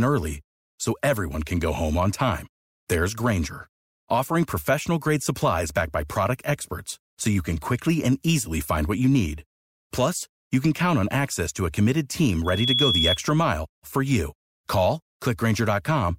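Loudspeaker feedback squeal sounds from 12.44 to 13.19 s, after "to a committed team" and before "mile for you". The microphone re-captures its own loudspeaker. At 3.4 kHz the loop gain passes unity, so a piercing tone swells within about a third of a second to roughly 5 dB over the speech.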